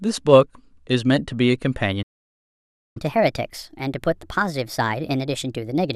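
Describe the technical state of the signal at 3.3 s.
At 3.3 s the speech runs 1.25 times fast and sits about four semitones high, from 2.97 s to the end: catch-up at higher speed, the player resampling its backlog after a stall.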